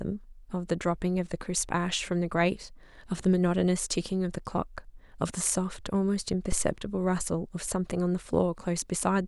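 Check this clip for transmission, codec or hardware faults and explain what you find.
One hardware fault appears in this speech clip: a phantom power thump at 6.52 to 6.76 s. A supply switching on or off on the live input sends a voltage step through the coupling capacitors, giving a deep thump peaking about -18 dBFS and decaying within roughly 54 ms. On a waveform it appears as a sharp low-frequency excursion; on a spectrogram, a brief dark band at the bottom.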